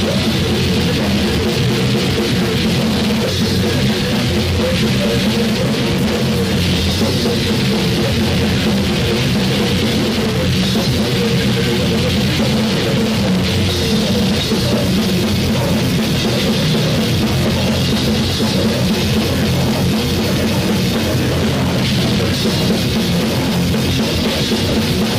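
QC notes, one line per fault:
No technical faults are audible at any point in the signal.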